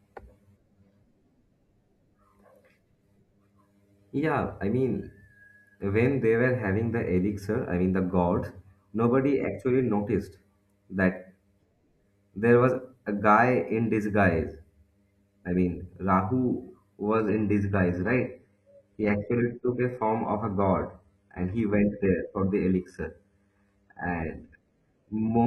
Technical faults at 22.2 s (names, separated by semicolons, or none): adaptive stream at a lower bitrate